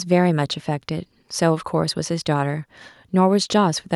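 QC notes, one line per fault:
Nothing to log for this speech recording. No fault was heard at any point.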